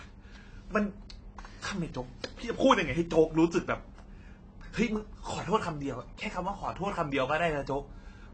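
Throughout, the speech was likely encoded with AAC compression at a low bitrate, which fits AAC-LC at around 24 kbps. The encoder discards everything above 8.3 kHz and coarsely quantises what remains, so the voice sounds dull and smeared, with a fizzy, warbling texture on sibilants.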